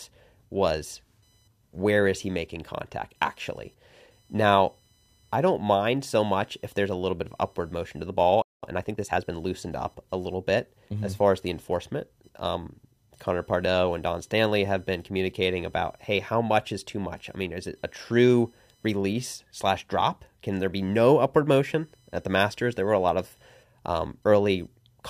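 Computer activity noise runs under the whole recording. It is a faint buzz, pulsing at around 1 kHz and sitting roughly 45 dB below the speech. Its texture shifts with nothing in the talking. That points to electrical interference: processor, graphics or mouse activity pulls on a ground shared with the audio circuit. The noise rides along on the signal and follows the computer's workload, not the speech.

At 8.42 s, just after "upward motion to the", the speech cuts out abruptly. There is a playback stall. Silence lasts about 0.21 s, until 8.63 s. The player most likely ran short of data, or its thread was held up. It had nothing to send to the output until it recovered. The speech then resumes where it broke off.

From 8.63 to 9.45 s there is a time-compressed catch-up. The player clears the backlog built up during the stall. It drops small slices of audio and cross-fades across the gaps. 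This plays the speech at 1.25 times normal speed. The pitch stays where it belongs, so the speech sounds hurried, not higher. Normal pacing returns as "up a little bit" begins.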